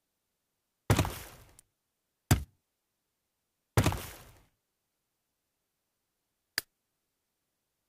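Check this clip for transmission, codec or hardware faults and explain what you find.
There's one fault: at 1.59 s, an electrical switching spike, a sharp snap peaking around -30 dBFS, likely a nearby switch or discharge arcing into the audio line.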